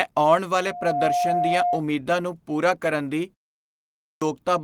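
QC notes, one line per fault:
0.59–1.84 s, loudspeaker feedback squeal: a 708 Hz tone swells within half a second to roughly speech level, then stops before "ਨੂੰ ਪੂਰਾ ਕਰਨ ਦੀ". The mic-to-speaker loop is self-oscillating.
3.67–4.22 s, clipped start after a pause: after "ਨੂੰ ਪੂਰਾ ਕਰਨ ਦੀ" and a 0.4 s pause, the next 0.55 s is swallowed. Speech resumes abruptly once the output device has woken up.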